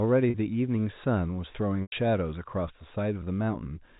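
At 0.30 s the speech briefly breaks for about 40 ms, ending at 0.34 s. This is packet loss with pitch repetition. The receiver fills the gap by repeating the last pitch period, so the sound holds with a slight buzz. At 1.82 s a longer 100 ms loss follows, lasting to 1.92 s. Here the repeated period fades toward silence before the speech cross-fades back. The lengths point to two and five lost packets. Both gaps sit within the 4 kHz G.711 telephone band.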